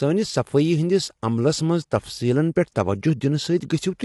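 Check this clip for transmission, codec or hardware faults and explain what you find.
Two codec faults are present in this speech clip.

Low-delay AAC compression runs throughout. The speech sounds rough and grainy, with nothing above 11.7 kHz. Short transform frames, likely from AAC-ELD at roughly 32 kbps, resolve harmonics poorly.

Pre-echo occurs at 2.55 s. A short hiss leads a sharp attack by about 12 ms. The block's quantisation noise spreads into the quiet moment before it, softening the onset.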